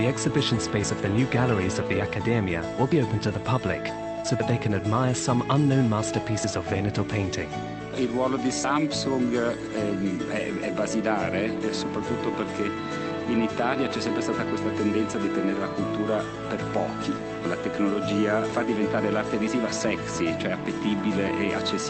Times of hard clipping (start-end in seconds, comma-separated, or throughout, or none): none